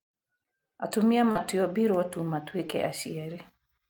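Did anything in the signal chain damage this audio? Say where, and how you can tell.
Yes. Short concealed packet loss at 1.31 to 1.37 s and again at 2.67 to 2.71 s points to the network stage. About 40 ms and then 20 ms of the speech arrived too late or not at all. At each gap the decoder invented a stand-in by extending the preceding sound, copying its pitch where it was voiced or shaping noise where it wasn't, then crossfaded back into the real stream. That is what leaves the brief smeared, wobbly patch at each time.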